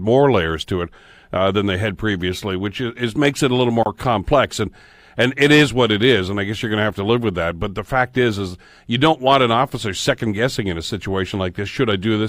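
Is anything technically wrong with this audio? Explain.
Yes. At 3.83 s, between "makes it a little" and "complex and and it", there is a gap at a join of encoded pieces. The speech stops for 29 ms, then resumes where it left off. Two separately encoded segments were joined without trimming the encoder's leading delay and trailing padding. The silence has smeared edges.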